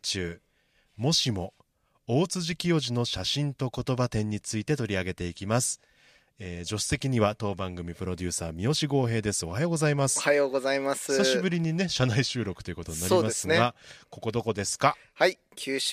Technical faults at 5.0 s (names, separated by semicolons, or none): none